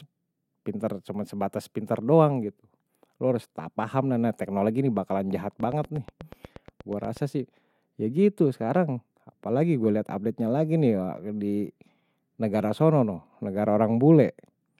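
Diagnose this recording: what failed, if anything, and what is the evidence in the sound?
Train of clicks after "teknologi ini bakalan jahat": regular ticks at 8.3 per second from 5.60 to 7.18 s, roughly as loud as the speech, likely interference picked up in the analogue wiring.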